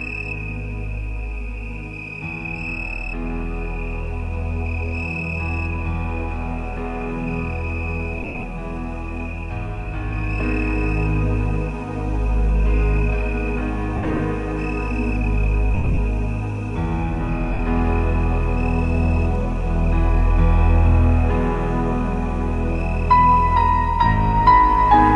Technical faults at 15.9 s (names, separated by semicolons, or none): lost LE Audio frames